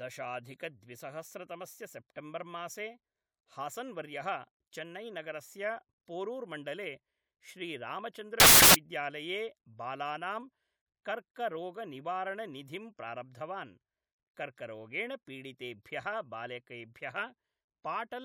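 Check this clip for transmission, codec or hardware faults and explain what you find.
One fault turns up in this speech clip, from 8.40 to 8.75 s: samples built from the wrong bytes. For about 0.35 s, the reader assembles each sample from mismatched bytes, so the rapidly changing low bits dominate. This produces a burst of loud, harsh broadband noise, seen as a dense waveform block and broadband spectrogram smear.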